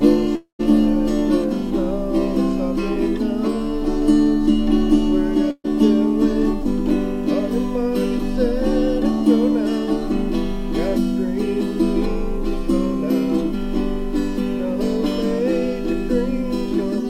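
Video or display buzz runs through the whole audio: a hum at the 60 Hz picture field rate with hash above it, about 30 dB below the signal. It comes from a screen or video cable coupling interference into the audio path. A long network dropout, the likely cause, hits from 0.35 to 0.61 s. The last sound is carried on as a fading fill for about 235 ms, including roughly 120 ms of near-silence, and the audio returns with about 240 ms gone. A burst of packet loss occurs from 5.51 to 5.70 s. The receiver stretches the preceding sound over about 130 ms, letting it decay with about 60 ms of silence, then resumes further on. About 140 ms of the original is missing, and the gap adds roughly 13 ms to the timing.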